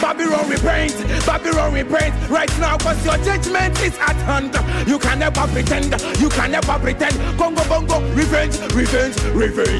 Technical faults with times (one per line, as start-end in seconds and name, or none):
none